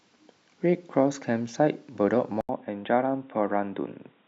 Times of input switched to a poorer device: 2.41-4.28

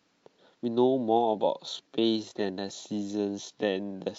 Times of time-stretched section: 1.19-4.19

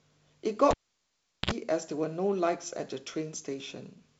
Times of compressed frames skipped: none

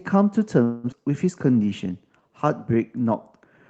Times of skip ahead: 0.92-0.95

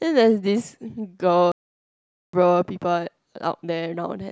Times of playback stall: 1.52-2.33

